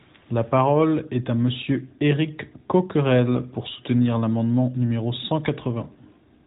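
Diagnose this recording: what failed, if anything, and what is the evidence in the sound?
Nothing failed in this recording.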